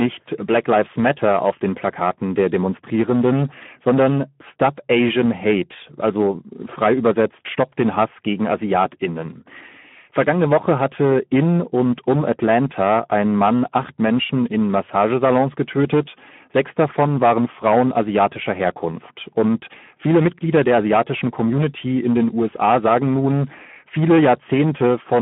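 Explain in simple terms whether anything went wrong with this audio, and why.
Hard clipping runs through the whole speech clip. The recording was too loud, so its peaks were cut flat, adding a harsh, crackly fuzz on louder moments. The speech was also squeezed through the Speex codec, an old chat-style voice codec. It sounds noticeably hoarse and buzzy, and muffled, with nothing above about 3.8 kHz.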